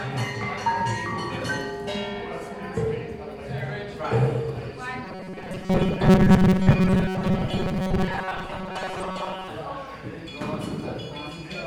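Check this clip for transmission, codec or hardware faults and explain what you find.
One fault, from 5.05 to 9.51 s: robotic sound from repeated short buffers. Incoming audio likely stalled, so a roughly 5.3 ms block kept replaying while most of the real signal was skipped. That looping imposes a fixed 188 Hz buzz, giving the sound a rigid, metallic tone.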